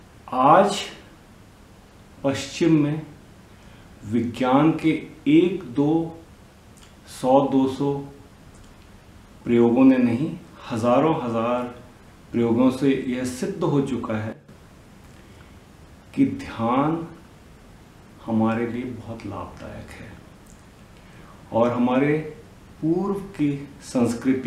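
At 14.33 s the level drops abruptly by about 12 dB. It comes back at 14.49 s. This is a sudden gain jump. The sound and background noise fall together, with no fade. The likely cause is a gain change applied between samples without a ramp.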